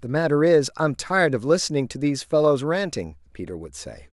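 No technical faults are audible.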